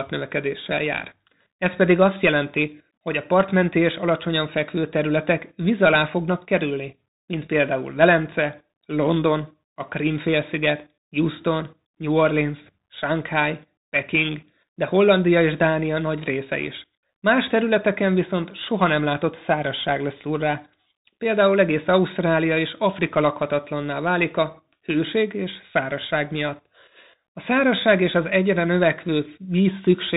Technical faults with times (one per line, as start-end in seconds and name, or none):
0.00-30.16 Bluetooth CVSD headset codec